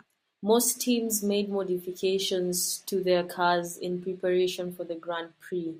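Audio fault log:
Nothing stood out on listening to this speech recording.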